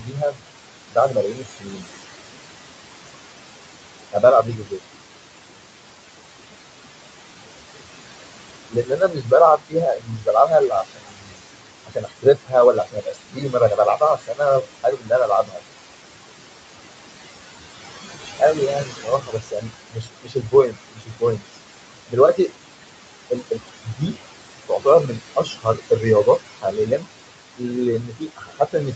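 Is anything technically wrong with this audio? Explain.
Yes. The noise suppressor is mishandling this speech in two ways.

Noise suppressor artifacts run through the whole clip. The suppressor estimates the steady background of the room, which sits only about 9 dB under the speech, and pulls those bands down by about 21 dB, frame by frame. Because its gain keeps changing, the background dips in the pauses and swells back under the talking.

Speech cut by the noise suppressor happens when the suppressor takes parts of the speech itself for noise and attenuates them along with the background. This occurs in five stretches: 0.00 to 1.87 s, 4.12 to 4.80 s, 8.71 to 15.60 s, 18.14 to 22.51 s, and 23.30 s to the end. Within each stretch the drops are intermittent, reaching about 17 to 22 dB at their deepest. The affected portions add up to about a second in the first stretch and under half a second in the second, about three seconds in the third and about two seconds in the fourth. 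In those moments, soft consonants and word endings sound swallowed or faint.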